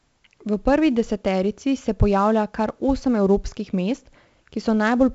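From start to finish the speech carries a gritty hiss that rises and falls with its level, roughest on the loudest syllables, with smeared distortion on sharp onsets and a dull top end where nothing survives above about 7.7 kHz. This is heavy 4-bit ADPCM compression: each sample is coded as a coarse step from a prediction, and the adapting step size lags on fast attacks. The cut-off and sound fit roughly 64 kbps at a 16 kHz sample rate.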